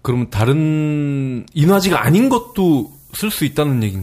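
From 1.69 s to the end of the clip, the speech carries low bit depth with noise shaping. The signal has been reduced to very few levels, which fits an 8-bit signal. The rounding error from that coarse step is not left flat. It is fed back and pushed toward high frequencies. The result is a steady, thin hiss that climbs sharply toward the top of the band. It sits roughly 25 dB below the speech.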